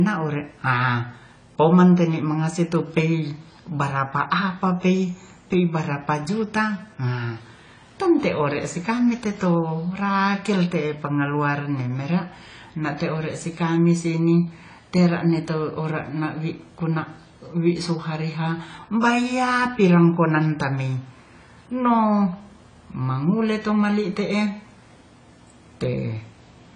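Speech, dull and smeared throughout with nothing above 10 kHz, most likely from AAC compression stripping high bands, which fits a low bitrate around 24 kbps.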